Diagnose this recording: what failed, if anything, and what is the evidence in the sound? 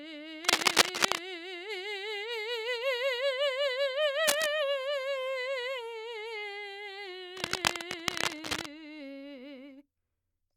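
Scratchy bursts cover the music at 0.44–1.19 s, 4.27–4.48 s and 7.37–8.66 s: cable scratch noise from analogue wiring, likely a worn connector whose contact resistance fluctuates.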